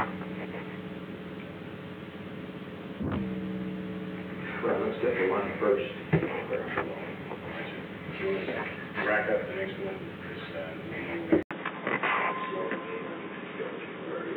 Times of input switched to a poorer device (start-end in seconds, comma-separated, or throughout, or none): 11.43-14.37